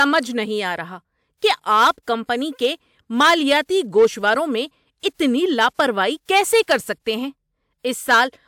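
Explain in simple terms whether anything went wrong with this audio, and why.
Nothing went wrong with this audio, because no fault can be heard anywhere in it.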